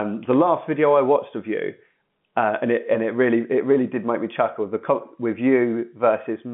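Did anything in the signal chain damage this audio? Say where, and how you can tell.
No, nothing in the chain damaged this speech; it is carried over G.711 telephone coding, which accounts for the narrow 150 Hz to 3.5 kHz line band.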